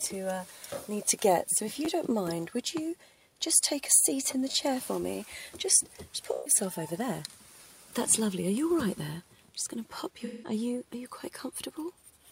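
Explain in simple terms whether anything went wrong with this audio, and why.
A couple of different things went wrong here, both quick blips rather than anything lasting.

First, there are three short stutters from a repeated buffer, at 1.85 to 1.87 s, 4.51 to 4.54 s, and 9.90 s. Each time, fresh audio showed up late, so the player just looped the last little chunk it had, twice, then three times, then once more. The chunks are so tiny, which fits a 10 ms buffer, that you hear a click or brief buzz rather than an obvious echo. Essentially nothing goes missing.

Second, there are two spots of AAC frame loss with concealment, at 6.33 to 6.54 s and 10.25 to 10.53 s. A few compressed frames never arrived, about 128 ms and 171 ms of audio, so the decoder guessed at what should be there by stretching the last good sound. That's why those stretches come across as smeared, noisy and a bit phasey instead of clean.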